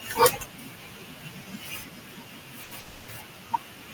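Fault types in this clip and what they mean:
Speech cut by the noise suppressor: The suppressor mistakes parts of the speech for background and lowers them. This happens across the whole clip, from start to end. At its deepest, the speech is pulled down by about 12 dB. Soft consonants, word endings or a quiet phrase sound swallowed or faint. The room noise sits about 26 dB below the speech, yet the suppressor still clips quieter speech along with it.
Short stall from a late packet: A packet arrives after it is due, and the receiver has nothing ready to play. It stretches the last sound to cover the wait. Here that is at 2.63 to 2.73 s. About 80 ms of held sound is inserted. Nothing is lost, and the speech resumes from the same point. The result is a brief drawn-out moment with a slight buzz or dip.
Call audio freeze: From 2.79 to 3.10 s the audio stops moving forward. The last sound is carried on as a fading buzz or hiss for about 290 ms. 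It never drops to full silence. Speech then continues from where it paused, so nothing is missing, but the timing is pushed back. The likely cause is packets held up in transit, leaving the receiver's buffer empty until they arrive.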